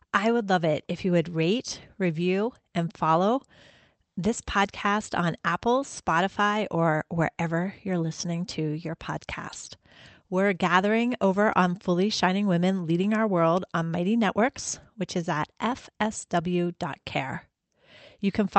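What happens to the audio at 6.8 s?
Nothing goes wrong at 6.8 s: the speech passes through intact, with only the steady band-limited character of the Opus call path, which tops out around 8 kHz.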